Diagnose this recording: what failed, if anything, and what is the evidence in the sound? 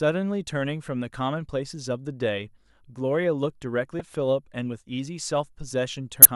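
The codec stage failed: damaged data in a compressed stream causes two brief disruptions in the speech, at 3.97–4.01 s and 6.22–6.26 s. The decoder misread corrupt frames and lost sync. On a spectrogram these appear as smeared broadband blocks, and on the waveform as jagged discontinuities.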